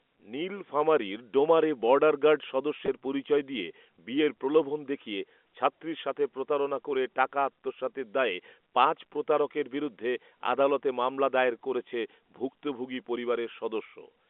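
Packet loss with pitch repetition occurs at 2.86 to 2.88 s, where about 20 ms of speech goes missing, which fits a single dropped packet. The receiver fills the gap by repeating the last pitch period, so the sound briefly holds with a slight buzzy quality before resuming over the narrow G.711 telephone band.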